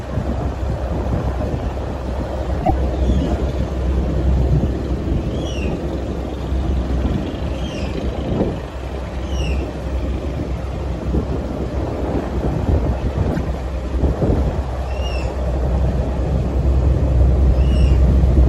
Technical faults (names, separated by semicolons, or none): damaged data in a compressed stream